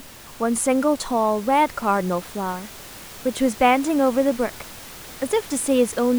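Nothing here needs attention, and the only thing in the background is a bit of ordinary room noise sitting about 20 dB under the speech.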